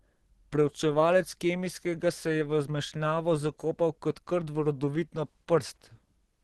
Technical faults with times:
0.00-6.43 Opus compression

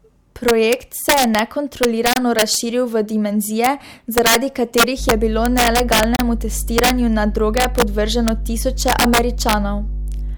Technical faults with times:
0.00-10.37 integer overflow
2.13-2.16 gap between stream segments
4.96-10.37 mains hum
6.16-6.19 gap between stream segments

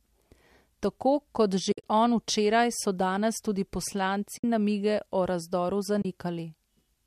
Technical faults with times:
1.72-1.90 AAC frame loss with muting
4.38-4.44 AAC frame loss with muting
6.02-6.05 AAC frame loss with muting

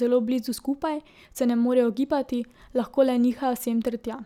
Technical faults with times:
none

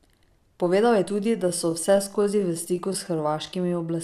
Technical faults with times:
1.04-4.04 time-stretched section

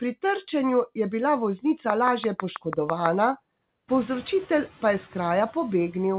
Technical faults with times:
1.90-3.07 train of clicks
3.88-4.14 noise suppressor catching up

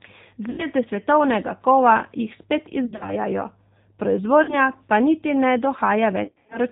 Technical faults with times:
0.00-6.72 G.729 codec
0.50-0.68 VoIP packet loss concealed by the speech codec
2.86-3.16 VoIP packet loss concealed by the speech codec
4.43-4.55 VoIP packet loss concealed by the speech codec
6.24-6.58 VoIP packet loss concealed by the speech codec

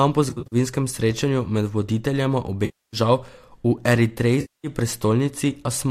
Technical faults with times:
0.29-0.56 AAC frame loss with concealment
2.65-2.97 AAC frame loss with concealment
4.41-4.67 AAC frame loss with concealment

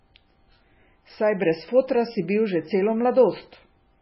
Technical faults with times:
0.00-4.01 MP3 compression

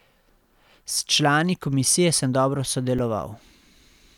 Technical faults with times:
2.98 repeated buffer

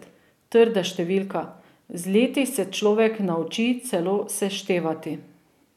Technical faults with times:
none

